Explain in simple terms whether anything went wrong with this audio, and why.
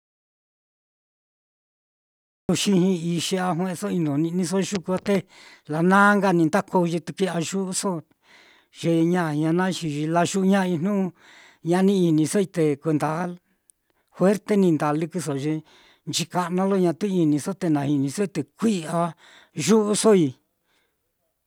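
Something did go wrong, right at the start. The clip opens with an audio dropout to silence that runs until about 2.49 s. For those first seconds there is nothing at all, not even the faint background hum a room normally has. Then the speech begins abruptly, already in mid-flow. The likely cause is that the input was briefly lost, through a loose connection or an accidental mute, while recording carried on. Whatever was said then is gone.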